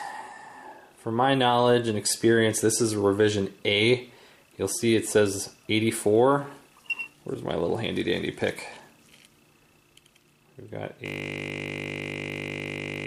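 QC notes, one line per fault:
11.06 s to end, system hang loop: the sound collapses into a steady 50 Hz buzz that runs to the end of the clip. A 20 ms piece of audio repeats about 100 times while the sound hardware keeps replaying its buffer after the system froze.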